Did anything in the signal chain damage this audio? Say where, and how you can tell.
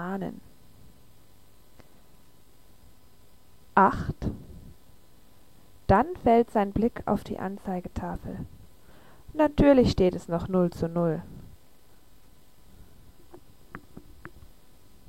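Yes, at the buffer between two devices. From 0.35 s to 14.52 s there's a click about every 1.77 s, roughly ten in all, evenly spaced while there's signal. That steady spacing is the telltale sign of clock drift buffer slips. The likely cause is two clocks disagreeing by something like 100 ppm, so the buffer creeps full or empty and then drops or repeats a handful of samples, and each jump clicks.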